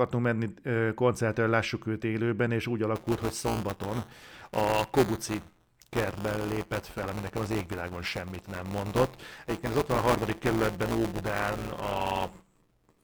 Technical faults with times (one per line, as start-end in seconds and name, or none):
2.95-13.04 buffer tearing